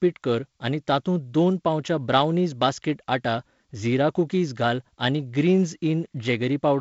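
No faults are audible; the speech comes over G.722 wideband telephone coding at 48 kbit/s, with nothing above 7.7 kHz and the light coding noise that rate carries.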